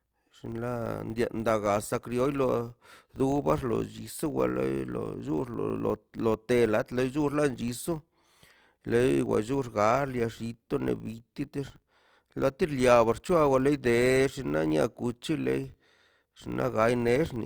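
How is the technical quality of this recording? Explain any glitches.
The speech has a steady glitch running all the way through. It's a filter restarted on every block, so each 20 ms block opens with a tiny transient, giving a 50 Hz buzz that rises and falls with the speech level.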